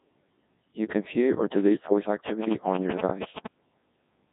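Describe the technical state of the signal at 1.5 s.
At 1.5 s you're hearing the Codec 2 vocoder, same as across the whole clip. Only pitch, voicing, energy and a rough spectral envelope survive, then sine waves rebuild the speech, so it's robotic, buzzy and heavily mangled, with nothing above 3.8 kHz, which fits a rate around 1.6 kbit/s.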